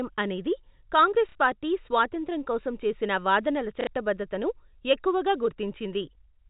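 At 1.29 s, just before "పార్టీ స్వాతంత్ర్యం కోసం", and again at 3.81 s, packet loss with the last packet repeated fills 60 ms. The replayed block ignores the pitch cycle, and a brief robotic stutter buzzes near 33 Hz, fitting 30 ms packets.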